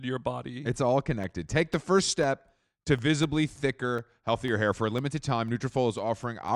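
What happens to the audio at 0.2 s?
Nothing goes wrong at 0.2 s; the audio there is intact, with no dropout, click, distortion or other fault.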